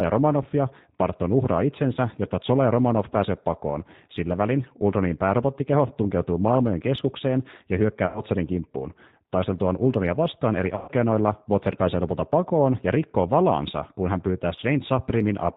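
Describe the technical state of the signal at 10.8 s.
At 10.8 s you're in the middle of a VoIP packet loss gap that the speech codec concealed, running from about 10.76 to 10.92 s. Around 120 ms of audio went missing, which fits four dropped packets. The decoder filled it by replaying its last pitch and vocal tract filter with falling gain, so the sound smears into a fading buzzy tone or coloured noise, and it takes a little while to recover once real frames resume.

Underneath that, the whole clip is running through the G.729 codec at 8 kbit/s. It builds the speech from a filter, a pitch predictor and a few pulses per frame, and drops everything above 4 kHz. That gives this spot the same audibly rough, slightly synthetic, band-limited quality as the rest of the clip.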